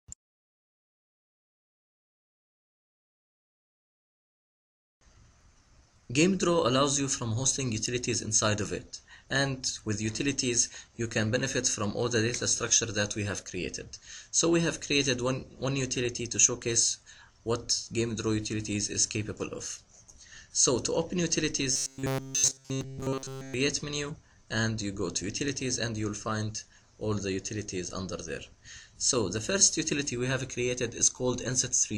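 From 21.72 to 23.54 s the audio turns into a rigid, metallic robotic buzz at 134 Hz, likely from repeated short buffers of about 7.5 ms looping throughout.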